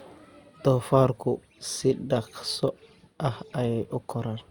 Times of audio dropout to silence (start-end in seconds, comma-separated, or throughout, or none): none